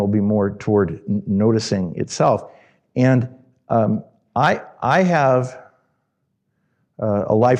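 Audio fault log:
4.09 s, DAB burbling: a brief burst of burbling just before "I I have". Bit errors from weak reception slipped past error correction into the MP2 data. Corrupted samples put short noise blips in single sub-bands, fitting a small fraction-of-a-percent error rate.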